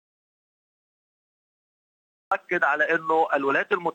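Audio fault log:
0.00–2.32 s, audio dropout to silence: total silence without room tone from the start until sound cuts in abruptly, likely a lost input recorded as silence.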